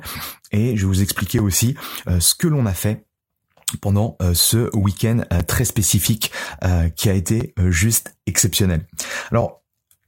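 Speech with a gap between chunks: four brief holes of silence, each about 6.5 ms long, fall at 1.39, 5.40, 7.41 and 9.41 s. Their spacing on a 2.0 s grid points to audio handled in 2-second blocks, with a short stretch of silence inserted at each join, from codec padding or a player starting each block slightly late. The speech itself is intact; it is only interrupted at each boundary.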